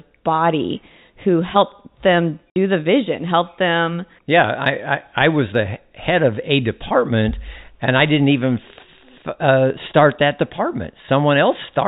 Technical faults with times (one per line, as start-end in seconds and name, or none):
2.50-2.56 packet loss filled with silence